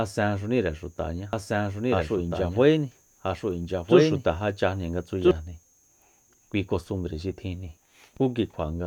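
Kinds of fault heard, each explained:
Doubled audio track: From 1.33 s to 5.31 s, a second full-band copy of the speech runs about one and a half seconds behind the original at roughly the same level, so two overlapping streams compete for attention. The copy has no decay or room colouring, and it cuts in and out abruptly at both ends. The likely cause is the signal being captured a second time through a slower path, or an edit leaving two copies out of step.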